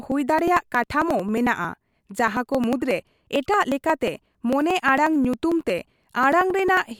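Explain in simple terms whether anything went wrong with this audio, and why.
Periodic USB or driver dropouts: from 0.12 to 6.86 s, something stalls the audio path every 0.09 s, skipping around 10 ms of speech each time, so you hear steady ticking.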